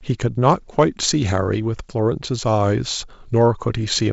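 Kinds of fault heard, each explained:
Nothing stood out on listening to this speech; the audio is band-limited to around 7.7 kHz, as expected for wideband telephone coding at 64 kbit/s.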